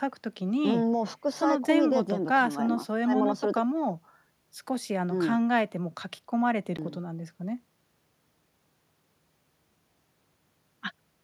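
At 6.77 s the speech breaks with a small tick and a very brief dropout of well under a twentieth of a second, after which it carries on from a different point rather than where it stopped. This is a CD skip: a knock or a flaw on the disc threw the laser onto another turn of its spiral track, so the player muted for an instant and resumed reading one or more revolutions away.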